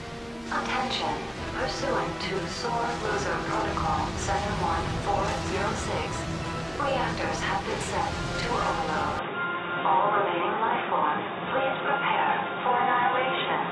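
A steady ticking rides over the audio from 2.75 to 6.84 s: a train of clicks, about 13.5 per second, evenly spaced, some fifty in all, peaking a little above the sound itself. Such a regular pulse train likely comes from electrical interference or a faulty connection or power supply. From 9.19 s to the end the sound turns dull and boxy with no gap and no real change in level, since nothing above 3.8 kHz remains and a faint new noise floor appears, pointing to an input switched to a poorer device, likely another microphone or a headset's call profile.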